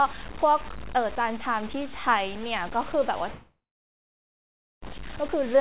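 From the first moment to the end, the speech carries a coarse, grainy distortion that rises and falls with the signal itself, the mark of low bit depth without dither. The sound was likely truncated to about 5 bits with no dither, leaving error only about 15 dB below the speech. Quiet tails turn gritty and sputter between steps. A waveform shows visible staircase levels, and a spectrogram shows signal-following noise smeared across the band, which stops at 4 kHz as the G.711 mu-law call path allows.

At 3.32 s a long network dropout begins and runs to 4.84 s. About 1.5 s of audio never arrived, and the gap was likely concealed by the receiver. The last sound is stretched into a brief fading buzz, then roughly 1.26 s of silence follows until the speech resumes with that stretch simply missing. On a waveform this is a short decaying smear followed by a flat line. A spectrogram shows a fading, repetitive smudge and then a blank band.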